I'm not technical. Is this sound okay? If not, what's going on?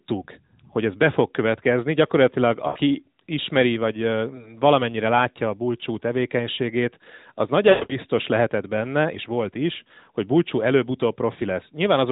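No. There are lost AMR speech frames at 2.68–2.78 s, 4.36–4.50 s and 7.70–7.97 s. The phone codec filled missing pieces by guessing, so speech briefly warbles, smears and fades.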